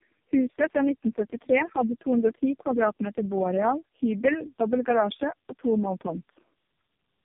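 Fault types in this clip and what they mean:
Tandem speech coding: The speech has passed through three low-rate speech coders in a row, each re-encoding the previous one's already damaged output, with plain telephone-grade links between them. The roughness, muffling and warbly smearing therefore stack beyond what a single coder would leave, which fits AMR-NB at around 5.9 and 4.75 kbit/s. Nothing is heard above 3.6 kHz, but simple band-limiting alone would sound dull without this compounded artefacting.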